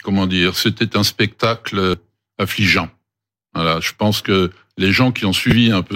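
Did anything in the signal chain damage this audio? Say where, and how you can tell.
Yes, at the codec stage: damaged data in a compressed stream. A brief blip sounds at 1.94 s. A longer glitch runs from 5.49 to 5.52 s. Corrupt bytes made the decoder misread frames and lose sync until the next header.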